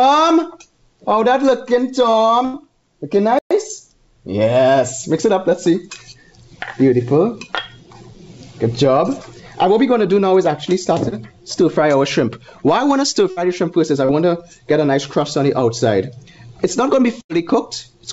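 At 2.45 to 2.57 s there is a burst of packet loss. About 87 ms was filled by continuing the last sound and fading it, which is heard as a held buzz or a fading hiss. The audio then resumes about 90 ms further on, so that stretch is missing.

At 3.39 to 3.51 s a playback stall cuts the sound off for 120 ms of silence. The player likely ran out of data or was blocked before it recovered.

At 11.09 to 11.15 s a short concealed packet loss appears. About 30 ms never arrived in time, so the receiver extended the preceding sound and blended back in. It comes across as a brief smear or wobble.

At 13.31 to 13.39 s another burst of packet loss occurs. The gap is filled for 59 ms with a continued, fading sound, and about 60 ms of audio is skipped.

At 14.05 to 14.12 s a second short concealed packet loss produces a similar brief smear. Here 32 ms was filled in place of about 30 ms of missing audio.

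At 17.21 to 17.32 s a third burst of packet loss repeats the pattern of the first. An 86 ms fill of held, fading sound covers about 90 ms of missing audio.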